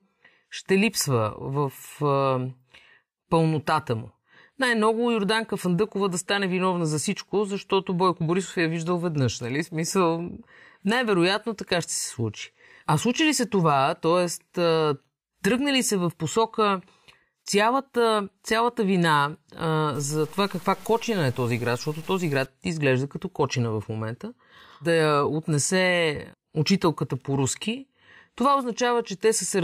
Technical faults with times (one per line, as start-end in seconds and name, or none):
19.95-22.46 low bit depth without dither